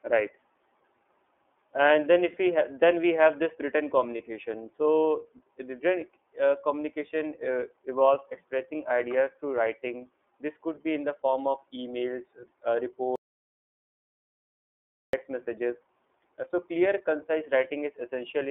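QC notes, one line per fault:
Throughout: iLBC codec. The speech is held to a narrow telephone band, roughly 300 Hz to 3.5 kHz, with nothing above that, and has a clearly audible rough, slightly synthetic edge. Each 30 ms frame's excitation is coded independently at a rate that fits about 13.3 kbps, which keeps the speech intelligible but thins out fine detail and leaves the grainy, processed character heard across the whole clip.
4.17–4.21 s: lost iLBC frames. A brief 30 ms stretch, consistent with a single lost frame, is filled by the decoder repeating the last pitch cycle blended with noise, so it comes across as a short held, faintly buzzy vowel rather than a gap. Since iLBC frames do not depend on earlier ones, the speech snaps back to normal immediately after, with no lingering smear.
13.16–15.13 s: audio dropout to silence. The speech cuts out abruptly mid-flow and is replaced by about 2.0 s of silence, with no room tone or background underneath, then resumes just as suddenly. 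Everything spoken in that window is missing. The total absence of any signal points to the input being lost while the recorder kept writing silence, most likely a disconnected device, a failed link or an accidental mute.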